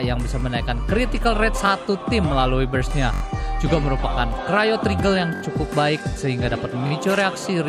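Repeated buffer stutters occur at 0.41–0.43, 1.66–1.69, 3.14–3.22, 5.36–5.42 and 6.87–6.91 s. Late audio made the device replay the same 21 ms chunk, which fits a 1024-sample buffer, one to four extra times. Each is heard as a brief buzzy stutter. A spectrogram shows identical repeated slices divided by vertical lines at the hard joins.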